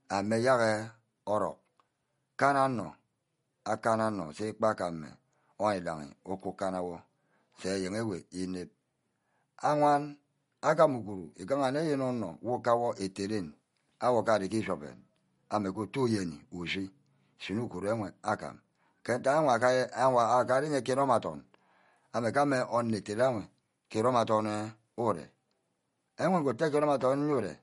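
Throughout, likely MP3 compression at a low bitrate, near 48 kbps, leaves nothing above 11.2 kHz, plainly audible as watery, swirling speech with metallic chirps on s sounds.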